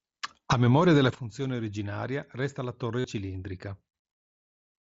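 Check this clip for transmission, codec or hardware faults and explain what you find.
One transmission fault is present in this speech, carried over a wideband mSBC Bluetooth headset link. From 3.00 to 3.04 s, after "funzione originaria resta la", there is concealed Bluetooth headset packet loss: 45 ms of packets dropped, likely about six frames, and repeated waveform filled the gap, leaving a brief buzzy tone.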